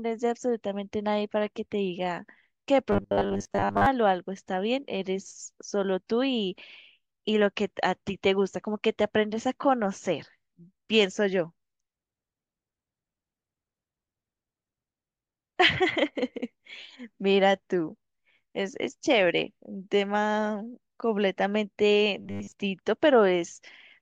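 Speech, with robotic sound from repeated short buffers at 2.92 to 3.86 s and 22.21 to 22.52 s. The voice hardens into a metallic 100 Hz buzz, likely from late-arriving audio being covered by replaying a chunk of about 10 ms for most of each stretch.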